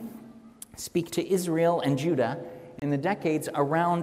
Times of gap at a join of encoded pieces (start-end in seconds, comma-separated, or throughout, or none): 2.79-2.82